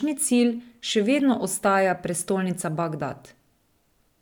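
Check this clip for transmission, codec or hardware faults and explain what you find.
Checking this clip turns up no faults to explain.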